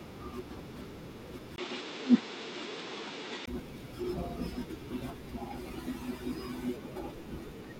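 Speech, with a stretch from 1.56 to 3.48 s where the sound abruptly turns duller and narrower. Nothing reaches above 8.3 kHz there, and a faint new background noise sits roughly 40 dB under the voice. The loudness barely changes. A brief gap of about 20 ms marks the switch, and the original brightness returns at 3.48 s. The likely cause is an input switched to a poorer device mid-recording, one with a tighter bandwidth and its own noise floor.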